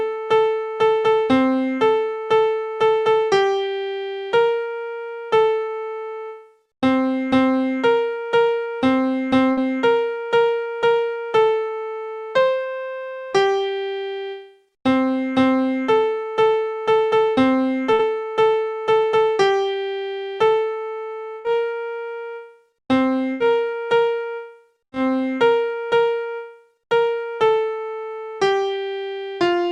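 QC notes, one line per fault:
9.51–9.59, 17.93–18.01, 21.39–21.46, 23.32–23.42 and 24.84–24.94 s: burst of packet loss. About 60 ms is missing in the first three and 80 ms in the last two. The receiver extends the preceding sound and fades it, so each gap is a held, fading tail rather than the abrupt silence or click of a plain dropout, and the sound then resumes further on with that stretch gone.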